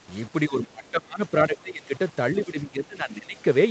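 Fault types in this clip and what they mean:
Low bit depth without dither: grainy distortion that follows the speech throughout, about 25 dB below it, likely 6-bit rounding; unlike steady hiss, it rises and falls with the signal.
Speech suppressed in double talk: the speech is pushed down by up to about 20 dB in stretches around 0.47–1.92 s and 2.42–3.39 s, likely echo-canceller ducking, not clean silent dropouts.
Other side's voice leaking through: a faint scrap of a different voice, about 40 dB below the speech, at 0.87–0.91 s, likely uncancelled loudspeaker echo rather than the talker's own repeat.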